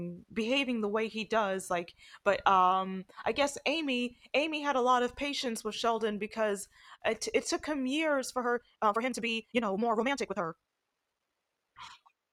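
From 8.39 s to the end at 12.33 s, the speech is a time-stretched section, likely from software squeezing the audio to fit a length by dropping short pieces while keeping pitch. Right after "took him years for", pace jumps to 1.84 times normal, sounding rushed at unchanged pitch.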